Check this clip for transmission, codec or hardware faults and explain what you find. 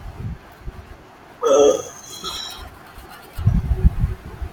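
There's one codec problem, a case of compressed frames skipped at about 2.28 s. The speech jumps ahead by around 70 ms, which fits roughly three 21.3 ms frames going missing or being rejected by the decoder. What you hear at that point is the speech skipping ahead, with that stretch of audio simply gone.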